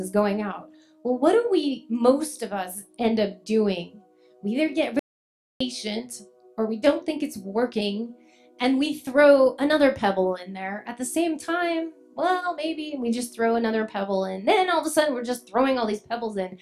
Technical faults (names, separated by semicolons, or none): audio dropout to silence